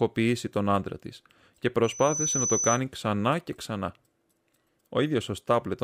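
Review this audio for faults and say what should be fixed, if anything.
Just after "τον άντρα τη και", from 1.84 to 2.81 s, there's loudspeaker feedback squeal: the mic hears its own speaker, and a 6 kHz tone swells over about 0.4 s to roughly speech level before "ξανά και ξανά". Aim the mic away from the speaker or notch 6 kHz.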